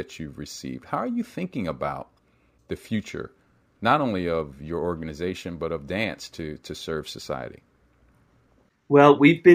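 A speech clip showing imaging from linear upsampling throughout: the rate was apparently raised by simply joining samples with straight lines, fitting a conversion from roughly 22 kHz to 44.1 kHz. That weak filtering dulls the top end and leaves a faint mirrored spectrum between 11.03 kHz and 22.05 kHz, some 40 dB down, heard as a light metallic shimmer on sibilants.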